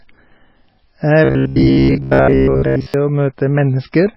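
The speech sounds watery and swirly throughout, with attacks smeared. This is likely MP3 compression at a starved bitrate, which fits about 16 kbps: the encoder drops the treble and flickers weak frequency lines. From 1.25 to 2.94 s the speech becomes a rigid metallic buzz at 66.8 Hz. This is robotic sound from repeated short buffers, likely caused by the software replaying a roughly 15 ms chunk to fill gaps while most of the real audio is skipped.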